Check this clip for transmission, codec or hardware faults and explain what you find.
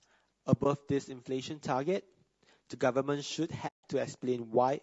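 Two faults are present: grainy low-delay codec coloration throughout the speech, and two muted dropouts.

Low-delay AAC compression runs through the whole clip and plainly roughens the voice. Its sound most likely comes from AAC-ELD at a low rate, consistent with about 32 kbps. At this low rate the bits run short, so the pitch harmonics cannot be coded cleanly. The voice sounds grainy, with noise filling the gaps between harmonics. On a spectrogram the harmonic stripes look smeared, and the top band looks patchy or synthetic.

AAC frame loss with muting occurs from 0.63 to 0.66 s and again from 3.67 to 3.84 s. The first gap fits one lost 20 ms frame; the second is about 160 ms, roughly eight frames. The decoder zeroed the missing spectrum, and the overlapping windows fade the sound out and back in. The first sounds like a brief dip and the second like a soft-edged hole. The waveform tapers smoothly to silence, and the spectrogram shows a clean vertical blank band.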